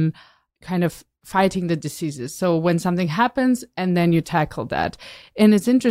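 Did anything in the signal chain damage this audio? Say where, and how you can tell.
No, nothing in the chain can be heard to damage this speech recording. No stage leaves any trace in the sound, so there is nothing to point to in time or at any point along the path.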